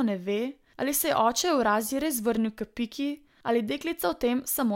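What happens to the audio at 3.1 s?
Nothing goes wrong at 3.1 s; the audio there is intact, with no dropout, click, distortion or other fault to be heard.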